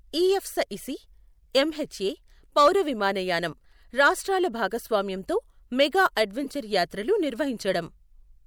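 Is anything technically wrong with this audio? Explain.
Yes, there are two separate faults in this speech.

From 2.58 to 2.68 s there is hard clipping. The level going into one stage of the chain ran about 4 dB past what that stage could carry, so the tops of the loudest waveform peaks were sheared off flat. Those squared-off peaks generate harmonics high above the speech itself, and this short burst of overload is heard as a gritty crackle riding on the loud syllable.

From 6.44 to 6.50 s a corrupt frame was decoded. A few compressed frames arrived with damaged bits, and the decoder rendered them rather than concealing them, so misread values placed energy at frequencies where the speech had none. The error peaks at around -20 dBFS and lasts only about 60 ms, coming through as a brief synthetic chirp or noisy blip laid over the speech.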